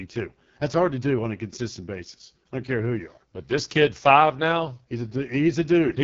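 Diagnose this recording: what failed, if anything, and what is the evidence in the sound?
Speech sounds raspy and rough throughout, with nothing above 7.2 kHz: the AMR wideband (HD Voice) codec is starving its pulse model, which fits its 6.6 kbit/s mode.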